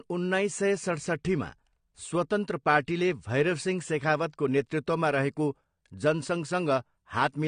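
A speech recording that sounds dull and smeared from start to finish, with nothing above 9.7 kHz and a fizzy, warbling texture on sibilants and sustained sounds that is plainly audible. The likely cause is AAC compression, specifically AAC-LC at a low rate, which fits a bitrate around 32 kbps: the encoder drops the highest frequencies and quantises the remaining spectrum coarsely, leaving gaps that make the top end swirl rather than ring cleanly.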